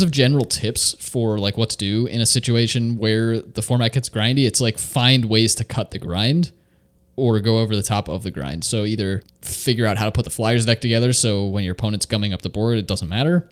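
No technical faults can be heard anywhere in this speech recording. There is nothing to place on a timeline and nothing here that calls for a fix.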